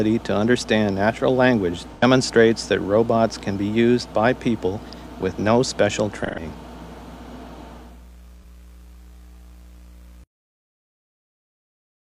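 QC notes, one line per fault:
1.94–2.03 s, 6.24–6.40 s and 8.42–8.44 s, AAC frame loss with concealment: brief smeared, phasey patches where the decoder patched over missing data from the last good spectrum. The gaps are about 85, 128 and 43 ms, which fits two, three and one lost frames.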